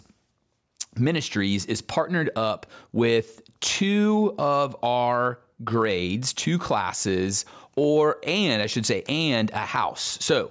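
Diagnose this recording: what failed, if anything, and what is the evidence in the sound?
Nothing in the signal chain audibly failed, and the recorded speech shows no disturbance attributable to any stage from capture through to playback.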